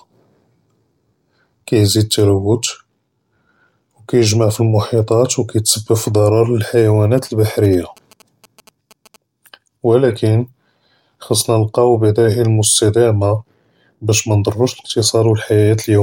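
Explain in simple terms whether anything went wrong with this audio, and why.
From about 7.18 to 9.16 seconds, a faint galloping tick-tick-tick pattern sits well beneath the speech, made of small clicks and short buzzy bursts. These are GSM signalling bursts. An older 2G mobile phone close to the recording gear was exchanging brief radio messages with the network, not carrying a call. The audio circuitry picked up those pulses and turned them into sound, so the buzz repeats about 217 times a second.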